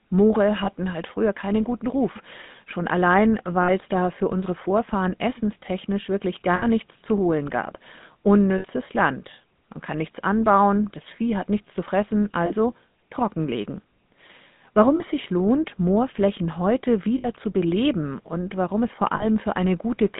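GSM full-rate codec damage runs throughout. The speech is squeezed into roughly 150 Hz to 3.7 kHz, and the coarse pulse-driven excitation, consistent with 13 kbps coding, gives it a plainly audible buzzy, gravelly roughness. Lost GSM frames occur at 0.64, 3.62, 6.56, 8.58, 12.46, 14.96, 17.18 and 19.16 s. At each, the decoder repeats the last good frame, holding the sound as a brief rough metallic ring lasting about 20 to 60 ms, which fits one to three missing frames.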